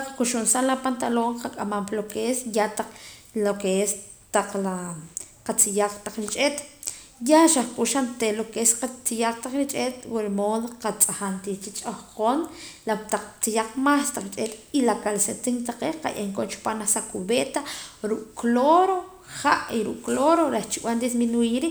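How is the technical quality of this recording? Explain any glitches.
No glitches to report: the speech recording shows no audible technical faults at any point.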